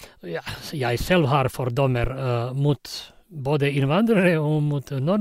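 At 2.04 s, just after "jeg selv har", a phantom power thump cuts in. A supply was switched on or off on the live input. The step passed through the coupling capacitors. It sounds like a deep thud, peaking near -12 dBFS and fading within about 14 ms, gone by 2.1 s.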